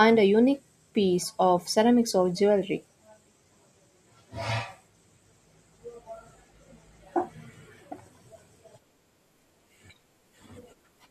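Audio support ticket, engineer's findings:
No faults found on listening.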